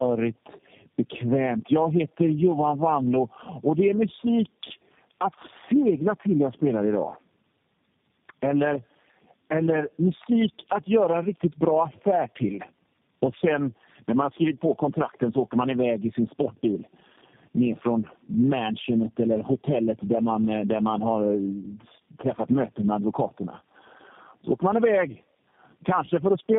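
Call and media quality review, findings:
Tandem speech coding, throughout. Rough, muffled, warbly speech; no content above 3.7 kHz. Sound points to three low-rate speech coders in series, likely AMR-NB then G.729A twice, bridged by G.711 transcoding at each border. Each decode/re-encode re-models already degraded output; the errors compound, smearing formants and adding noise beyond what any single codec produces. Probable component: interconnect/transcoding gateways.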